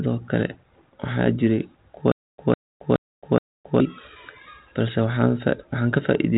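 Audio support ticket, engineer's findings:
Stutter with silent gaps, 2.12–3.80 s, right after "waxaa jiray kuwa". A 154 ms fragment replays 4 times, each followed by about 267 ms of digital silence, a steady 421 ms cycle. Likely a playback or stream stall re-serving its last buffer between retries. Unlike plain dropouts, the same fragment returns identically at an even pace, and the audio for that span is lost rather than gapped. The bed is band-limited at 3.8 kHz with light G.726 32 kbit/s grain.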